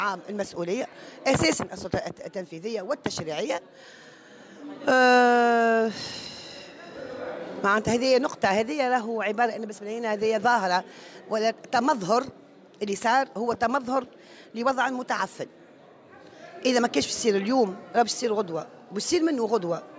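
Nothing here sounds wrong, with no glitches, dropouts or other technical problems anywhere in the recording.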